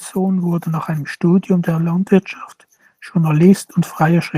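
From 0.13 to 2.18 s, automatic gain rising lifts speech and background together by about 4 dB; the waveform envelope swells steadily and spectrogram energy brightens uniformly across all bands.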